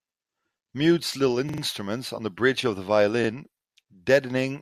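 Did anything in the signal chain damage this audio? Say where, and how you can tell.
Yes. A repeated buffer, at the driver or buffer stage. A 43 ms piece plays three extra times from 1.49 to 1.62 s, before "on the bridge of", and once more at 3.24 to 3.29 s. Late data made the device replay it. That length fits a 2048-sample buffer.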